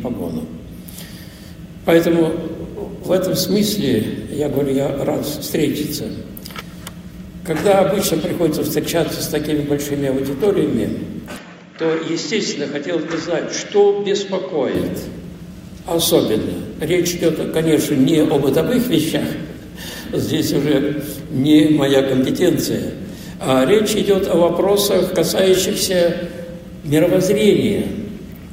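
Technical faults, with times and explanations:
11.37–14.75 s, input switched to a poorer device: sound dulls above 7.6 kHz, drops about 5 dB and gains faint new background noise without a gap, likely a device change rather than filtering.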